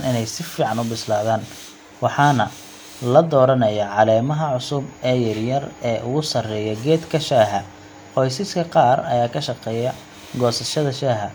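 No technical faults can be heard anywhere in the recording. The speech runs without any disturbance at any point.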